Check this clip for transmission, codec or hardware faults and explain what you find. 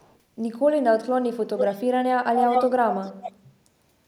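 There's an echo leak here: a delayed copy of the speech, trailing by about 0.42 s. It's barely audible at 0–0.19 s, as loud as the speech at 1.57–1.82 and 2.36–2.73 s, and slightly quieter at 2.9–3.32 s. It's likely a far-end speakerphone whose echo canceller let its own playback slip back.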